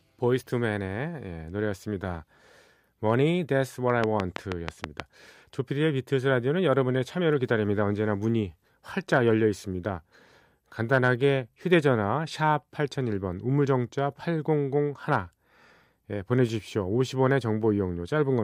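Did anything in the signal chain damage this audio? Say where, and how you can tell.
Yes. From 4.04 to 5.01 s a train of clicks, about seven similar pulses at a regular 6.2 per second, sits roughly 20 dB above the speech. A spectrogram shows evenly spaced full-band vertical lines, and the waveform shows matching spikes. The likely cause is interference coupling into the analogue wiring or interface.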